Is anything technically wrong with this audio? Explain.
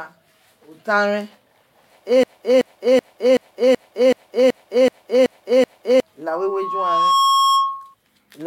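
Yes, the speech has two faults. From 2.23 to 6.00 s a 0.38 s fragment repeats exactly, back to back, ten times, and the speech that should fill that span is lost. This broken-record loop is likely a stalled player, encoder or stream resending its last buffered piece.

From 6.26 to 7.94 s a single 1.1 kHz tone swells over about a second into a squeal, ending about 5 dB above the speech. This is loudspeaker feedback squeal: a microphone picks up its own loudspeaker, and at that frequency the loop gain exceeds one, so the tone builds by itself.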